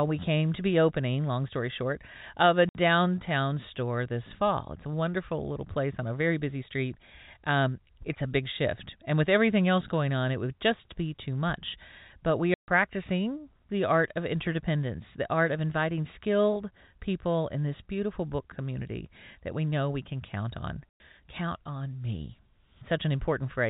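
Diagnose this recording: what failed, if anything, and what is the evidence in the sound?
Network packet loss filled with silence: hard dropouts at 2.69, 12.54 and 20.89 s, lasting 60, 140 and 110 ms. Those lengths fit lost runs of 10 ms packets.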